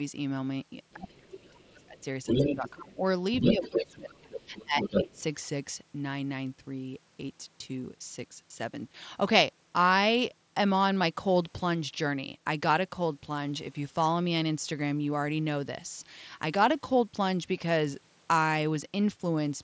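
From 0.92 to 2.7 s a second voice comes through at roughly the same loudness as the talker. This is the other side's voice leaking through, likely because the far end played on a loudspeaker and the echo canceller left part of it in the microphone signal. It returns from 3.41 to 5.22 s at a similar level.

Overlapping these stretches, the talker's own speech is pushed down. This is speech suppressed in double talk, likely because the canceller couldn't separate the near voice from the echo while both were active, so it attenuated everything. From 0.94 to 1.98 s about a second of the talker dips by up to about 25 dB. From 2.44 to 3.01 s about half a second drops by about 20 dB. From 3.52 to 5.16 s roughly a second and a half sinks by about 20 dB. The leak adds an unwanted voice, while this removes the wanted one, which fades or breaks into pieces. Throughout, the sound stops at 8 kHz, as the headset path passes nothing higher.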